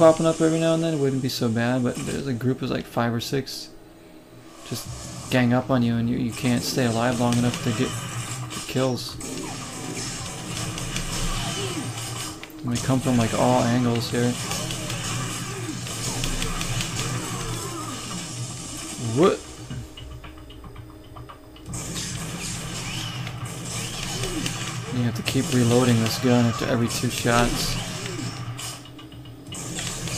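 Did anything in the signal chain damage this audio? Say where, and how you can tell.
No, nothing in the signal chain audibly damaged this audio. There are no audible signs that any stage, from the wiring through to playback, left its mark on it.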